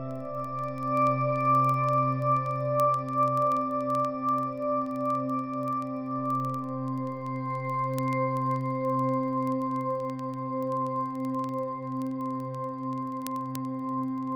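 Word clock ticks run through the whole audio, from 0.11 s to 14.32 s, as sharp clicks of uneven strength at a steady rate of roughly twenty per second, some three hundred in all. The receiving device is not locked to the sender's clock, and the error of about 400 ppm makes the clocks slip past each other every 50 ms or so, which fits a single sample being dropped or repeated each time. A spectrogram would show evenly spaced thin vertical broadband lines, and the waveform would show tiny step discontinuities at the same spacing.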